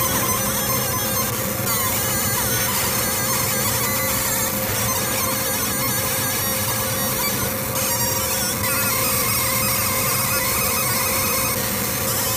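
No technical faults can be heard anywhere in the recording. There are no breaks, level jumps or other disturbances.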